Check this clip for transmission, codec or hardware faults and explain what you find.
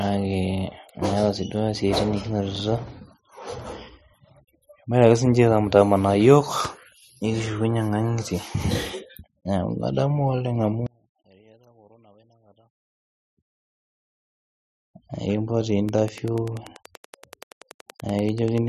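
Two faults turn up, both toward the end of this speech clip.

From 10.87 to 13.98 s the speech drops about 34 dB to a faint ghost, likely one channel inverted, so the shared centre cancels when summed to mono.

From 15.89 to 18.59 s there's a train of clicks, about 30 evenly spaced ticks at 10.4 per second, a bit louder than the speech, likely interference or a faulty connection.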